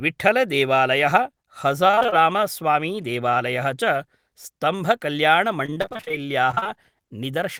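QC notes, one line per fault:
1.87–2.14 s, 5.66–6.18 s and 6.52–6.67 s: repeated packet loss (robotic sound). The speech turns choppy, with short pieces dropping out in quick succession. Each hole, none longer than about 20–30 ms, was filled by stretching the sound just before it, and the next hole arrived almost at once. Nearly half of each stretch (47–48%) is patched rather than real.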